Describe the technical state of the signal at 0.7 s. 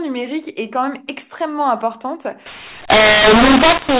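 At 0.7 s the speech is intact, carried through A-law G.711 telephone coding that confines it to the band below 4 kHz with only a faint level-following hiss beneath it.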